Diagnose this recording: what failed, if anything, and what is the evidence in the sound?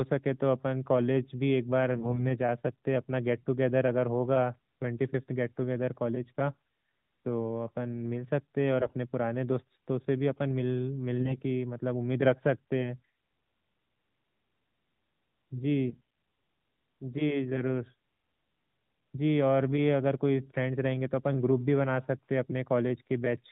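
AMR bit errors at 1.94–2.23 s, 8.80–8.94 s, 11.20–11.42 s and 15.88–16.01 s. This is a network-stage fault inside the narrowband AMR speech stream. On each burst the speech keeps its pitch and level but turns hoarse, scratchy and gargly. That sound points to flipped low-priority bits, roughly 7 to 10 percent, that misplaced the excitation pulses and skewed the fine gain and spectral values.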